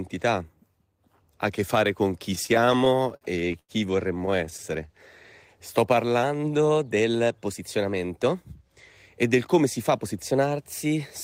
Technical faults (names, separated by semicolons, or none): repeated stalls (stutter); drift correction step; jitter buffer speed-up